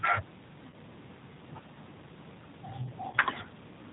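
The speech throughout has a slightly rough, synthetic quality, with nothing audible above about 4 kHz and a thin, band-limited sound. That is the plainly audible signature of the G.729 codec, here the G.729A variant, which fits an 8 kbit/s VoIP stream. Instead of carrying the waveform, this codec rebuilds each 10 ms frame from a vocal-tract filter, a pitch predictor and a handful of pulses, so the fine texture of the voice is lost. Twice the speech briefly smears into a stretched buzzy tone or coloured noise that sags in level, first at 0.70 to 0.75 s and again at 3.10 to 3.18 s. This is VoIP packet loss concealed by the speech codec. Each gap fits one lost 30 ms packet. The decoder fills the hole by extending its last pitch and filter settings while fading the gain, and because each frame depends on the one before, the voice stays weak or distorted for a short time after real audio resumes.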